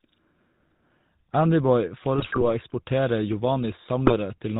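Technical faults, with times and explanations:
Throughout, GSM full-rate codec: plainly audible buzzy, gravelly roughness and nothing above 4 kHz, consistent with a 13 kbps GSM full-rate stream. The codec rebuilds the speech from a vocal-tract filter driven by sparse, regularly spaced pulses, so fine detail is lost and the voice sounds coarse.
2.16–2.44 s and 4.06–4.17 s, GSM bit errors: the speech breaks into squawks, pops and gargling. Corrupted filter, pitch or gain values make the decoder distort the spectrum or spike the level. The longer first burst fits roughly a dozen damaged frames, the second only a few.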